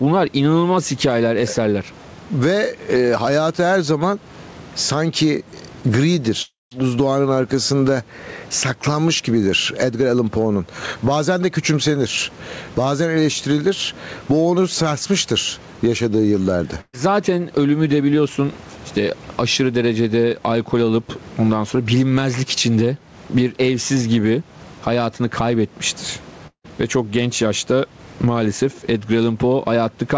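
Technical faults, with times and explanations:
Throughout, gain pumping: the level swings by around 15 dB. That's likely the mic gain set far too high and a fast limiter clamping down on every peak, so everything sounds squashed.
6.42–6.73 s and 26.47–26.66 s, long network dropout: both are likely stretches where no packets arrived. At 6.42 s a fading fill runs about 0.29 s and settles into roughly 0.18 s of silence. The audio picks up again at "buzdoğanın arkasında saklanmış gibidir" with about 0.3 s gone. At 26.47 s, right after "evsiz gibi hayatını kaybetmiştir", the fill runs about 0.17 s, ends in 0.08 s of silence, and 0.18 s is lost.
16.81–16.95 s, burst of packet loss: after "onu sarsmıştır yaşadığı yıllarda" the receiver stretches the last sound for 120 ms, fading it to a brief 20 ms hush. Then it jumps ahead to "zaten ölümü de biliyorsun", so 120 ms of audio simply isn't there.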